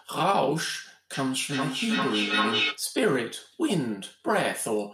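A speech recording with feedback echo between two devices from 1.13 to 2.86 s. A second device replays the audio into the microphone, repeating it roughly every 0.4 s at about 0 dB relative to the speech. On a spectrogram, shifted copies of each harmonic pattern stack up; the waveform shows repeating envelopes.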